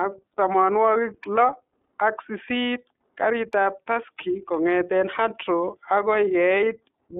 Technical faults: iLBC codec; lost iLBC frames

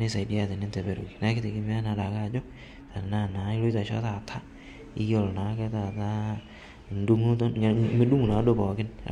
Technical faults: none

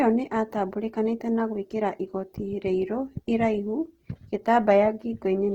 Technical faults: Opus compression

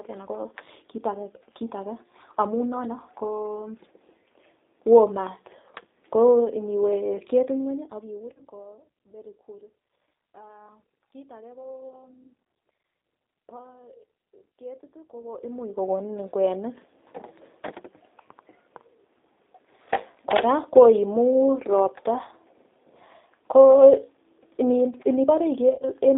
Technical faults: G.729 codec; VoIP packet loss concealed by the speech codec

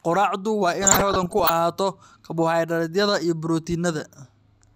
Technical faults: DAB burbling

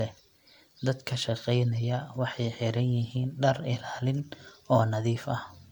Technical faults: generation loss

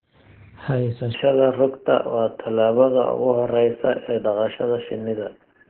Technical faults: Opus voice compression

